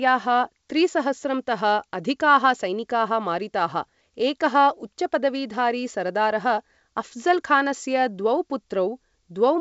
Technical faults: bit errors on an ADPCM link

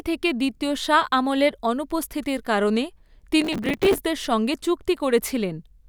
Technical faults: processor overload crackle

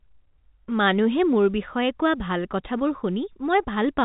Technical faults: none

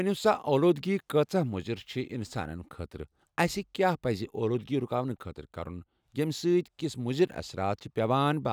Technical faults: none

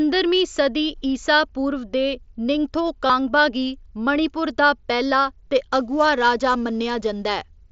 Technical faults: concealed Bluetooth headset packet loss; sample clock jitter

